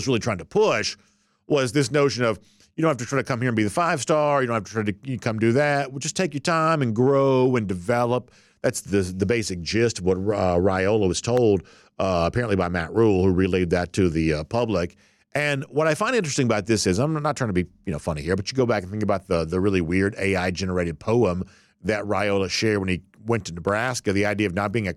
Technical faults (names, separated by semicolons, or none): loud pop